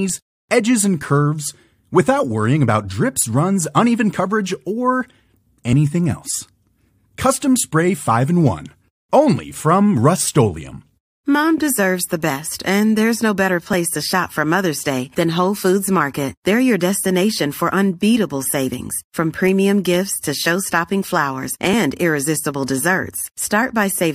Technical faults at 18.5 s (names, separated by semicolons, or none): none